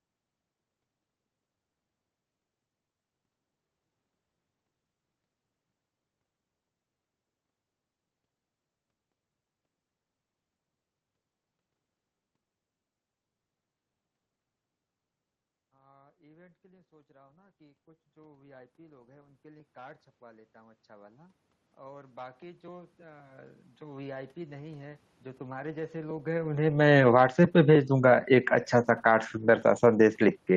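From about 15.6 s to 30.2 s you can hear automatic gain rising: the gain control decided the input was too quiet and kept pushing its gain up, roughly 23 dB in all, so the speech and the room noise swell together slowly rather than jumping.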